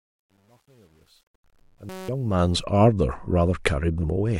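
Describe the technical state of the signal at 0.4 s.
At 0.4 s the speech sits in truncation distortion on a fade, which runs from 0.0 to 2.64 s and is worst at the start. The fade-in stage keeps too few bits without dither, consistent with about 10-bit resolution. The faint level sounds gritty. The waveform shows coarse square steps, and the spectrogram shows broadband hash.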